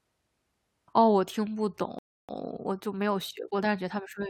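At 1.99 s the speech stops dead for 0.3 s, then resumes exactly where it left off. This is a rebuffering stall: playback ran dry, so nothing is lost, only time added.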